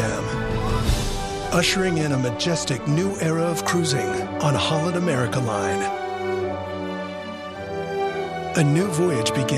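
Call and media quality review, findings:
No audible faults found.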